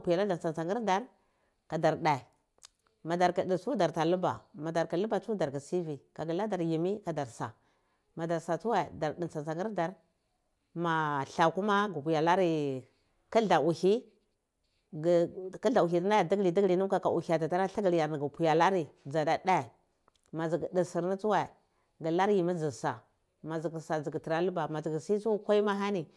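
No technical faults can be heard anywhere in this speech recording. At no point does anything interrupt or disturb the sound.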